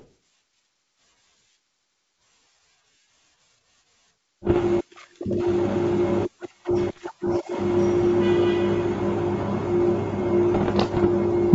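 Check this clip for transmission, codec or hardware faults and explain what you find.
Three bursts of popping, gravelly distortion with brief level jumps interrupt the speech at 4.47 to 4.59 s, 6.90 to 7.11 s and 10.54 to 11.06 s, the last the longest. These are bit errors on an ADPCM link, heard over wideband G.722 coding. Flipped bits, at most around one percent, corrupt the decoder's step size and prediction, so each error keeps ringing for milliseconds.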